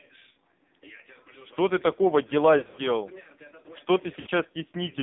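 Speech squeezed through the AMR narrowband mobile codec: the whole clip sits in a band of roughly 150 Hz to 3.7 kHz, and it's heavily damaged, buzzy and synthetic. That points to a low AMR-NB mode, around 5.9 kbps, where too few pulses are left to model the voice. There are also lost AMR speech frames from 2.58 to 2.86 s, with about 120 ms of gaps scattered over 200 ms and no run longer than 40 ms. The decoder patches each gap by repeating the last pitch and tract settings at a falling level, so you get choppy dips and warble. A second 60 ms loss at 4.20 to 4.27 s smears and drops out the same way.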